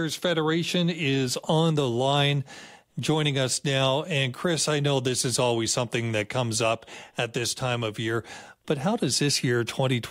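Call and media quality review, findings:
No audible faults found on the speech path; nothing to attribute to capture, transport or playback components.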